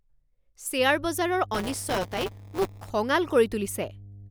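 From 0.77 s right through to the end, there's mains hum: a steady 50 Hz drone with a few low harmonics riding under the speech, sitting roughly 20 dB below it. That's the power line leaking into the signal path, most plausibly through a ground loop or a transformer close to the gear. It never lets up, so you hear it in the gaps between phrases too.

Then from 1.54 s to 2.90 s there's buffer tearing on top of that. The speech takes on a robotic, rattly buzz at 188 Hz, which fits a 256-sample buffer cycling at that rate. The software filling the ring buffer and the hardware draining it have drifted into each other, so every period a small slice of the buffer, something like 15%, still holds audio from the previous lap, roughly 10 ms stale. The hard splices on either side of that slice are what make the buzz, and it only shows up while there's speech to chop.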